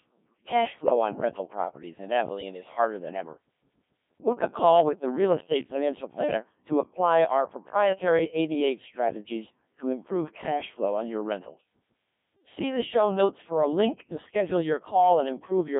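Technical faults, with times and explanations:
Throughout, Codec 2 vocoder: the speech is resynthesised from pitch, voicing, energy and a spectral envelope rather than the real waveform. It sounds heavily robotic and buzzy, fitting a rate near 1.3 kbit/s. A spectrogram shows synthetic harmonics between 150 Hz and 3.5 kHz, empty above 3.7 kHz.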